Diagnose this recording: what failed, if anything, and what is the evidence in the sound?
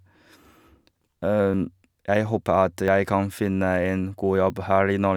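Likely dropped buffers (overrun) in the driver, with samples overwritten before being read: the speech skips ahead at 1.54, 2.88 and 4.5 s, losing about 40, 20 and 20 ms.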